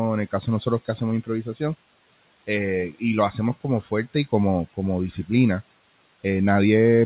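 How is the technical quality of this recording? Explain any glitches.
One glitch stands out. From 1.24 to 1.61 s, the noise suppressor cuts into the speech. It mistakes part of the speech for background and turns it down along with the room noise. The deepest dip is about 15 dB. Only around 150 ms of that stretch is affected in total. Soft consonants and word edges there sound swallowed and faint. The steady room noise sits about 21 dB below the speech. The sound also stops at 4 kHz, which fits a G.711 mu-law call codec running at 64 kbps.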